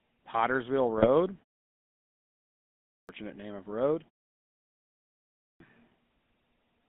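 The whole clip carries the GSM full-rate codec. Band-limiting to about 200 Hz to 3.6 kHz and pulse-driven excitation give the speech a buzzy, gravelly roughness consistent with 13 kbps.

From 0.98 to 1.08 s, GSM bit errors corrupt the decoder's parameters. The voice briefly squawks and gargles, which fits about three damaged frames.

At 2.75 s, after a 1.4 s pause, there is a clipped start after a pause. The output wakes late and swallows about 340 ms, so "name of road" begins abruptly.

At 5.26 s, after a 1.2 s pause, the same fault cuts about 340 ms. The speech again starts abruptly out of silence.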